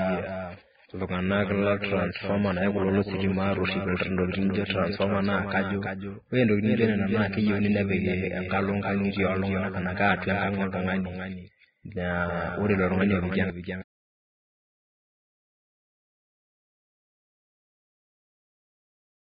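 From start to finish the speech is accompanied by a doubled audio track: a second, full-band copy of the same speech trails the original by roughly 300 ms and sits about 5 dB lower. What separates it from an echo or reverberation is that there is only one repeat, with no decaying tail and no room colour, just a clean duplicate out of step. The likely cause is the same signal being picked up again through a slower path.

Also throughout, the audio carries heavy Vorbis compression damage. Nothing remains above 4.9 kHz, and the treble below that cut-off has been quantised so coarsely that detail turns into hiss-like noise. Consonants sound grainy, tones roughened and attacks smeared. This is unlike a simple low-pass filter, which would only dull the sound without adding noise. The damage fits a very low bitrate around 11 kbps, likely from encoding with Vorbis at minimal quality.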